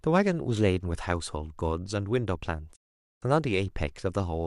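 At 2.75 s the speech drops out and stays silent until 3.23 s, a classic digital broadcast dropout. The receiver stopped getting valid frames and muted, with a quick fade of about 8 ms, so nearly half a second of programme is simply gone.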